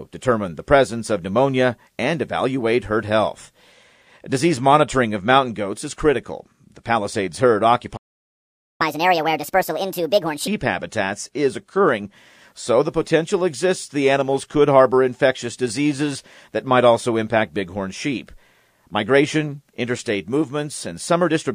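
At 7.96 s the sound just cuts out, mid-flow, and stays silent until 8.81 s, a gap of about 0.83 s. That's a playback stall. The most likely cause is the player starving for data or having its audio thread held up, so nothing reached the output until it recovered. When it comes back, it picks up from where it broke off rather than skipping ahead.

Straight after, from 8.81 s to 10.48 s, you get catch-up at higher speed. The player chews through the backlog it built up during the stall by resampling it at 1.5 times normal speed. Because it's resampling rather than time-stretching, the pitch goes up with it, by roughly seven semitones, so that stretch sounds hurried and chipmunk-ish. Once the lost time is made up, speed and pitch snap back to normal.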